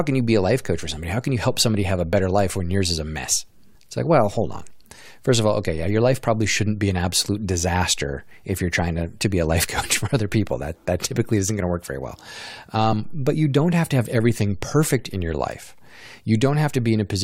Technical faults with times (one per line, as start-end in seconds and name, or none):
12.91 damaged data in a compressed stream